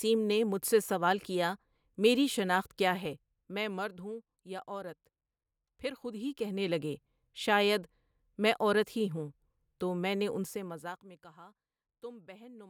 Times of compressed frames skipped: none

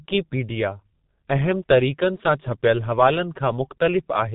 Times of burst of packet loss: none

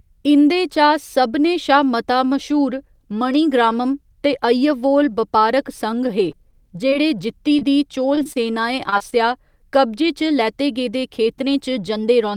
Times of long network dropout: none

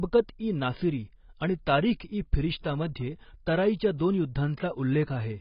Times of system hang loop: none

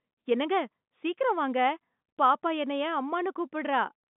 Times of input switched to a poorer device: none

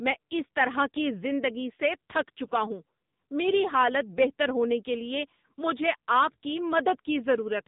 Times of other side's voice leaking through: none

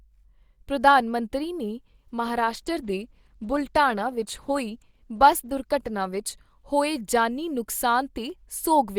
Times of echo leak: none

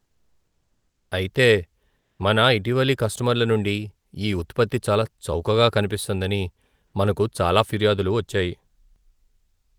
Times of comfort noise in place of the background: 0.00-1.11, 1.99-2.19

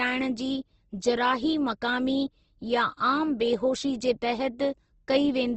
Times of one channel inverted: none

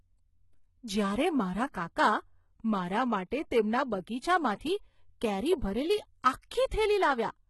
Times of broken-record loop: none

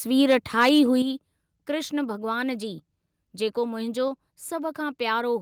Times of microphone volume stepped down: 1.02

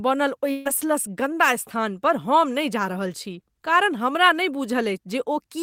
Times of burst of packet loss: 0.51-0.67

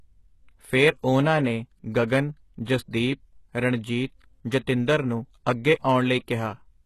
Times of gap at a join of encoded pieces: none

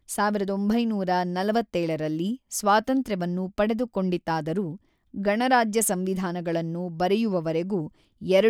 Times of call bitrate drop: none

